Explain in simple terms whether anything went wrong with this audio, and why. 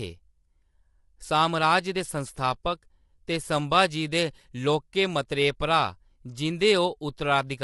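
Low-delay AAC compression runs through the whole clip: the speech sounds rough and grainy, with hiss between the tones and nothing above about 11.6 kHz. This is likely AAC-ELD, which codes sound in very short slices that capture pitch poorly at this quality.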